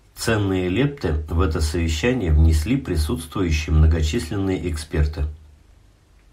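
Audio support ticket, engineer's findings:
No faults found on review.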